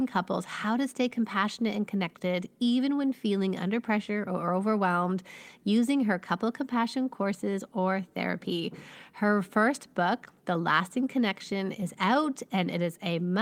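A speech recording with no technical fault to be heard anywhere in it. Nothing in the signal calls for a time or a cause to be noted.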